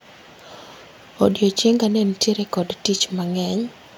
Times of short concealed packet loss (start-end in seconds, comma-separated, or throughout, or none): none